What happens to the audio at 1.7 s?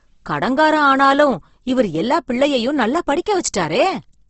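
At 1.7 s it's the same Opus compression heard throughout: speech sounds grainy and rough, nothing above 8.1 kHz, likely a low-bitrate CELT encode filling starved bands with noise.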